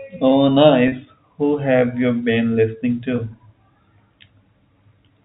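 At 0.88 to 0.92 s and 3.16 to 3.18 s, packet loss with pitch repetition loops the last pitch period, heard as a brief buzzy hold; spectrograms show frozen, repeated harmonics.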